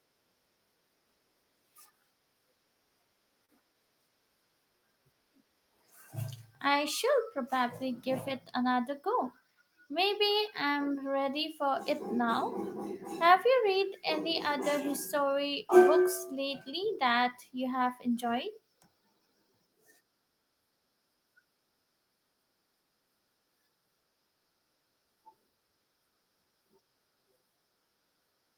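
At 3.45 to 3.51 s, a short stall from a late packet stretches the speech by 33 ms, held flat as frozen harmonics, with a slight buzz or dip. From 8.94 to 9.63 s, a jitter buffer speed-up trims about 50 ms, running 107% fast. The waveform shows compressed syllables while the harmonic spacing stays unchanged.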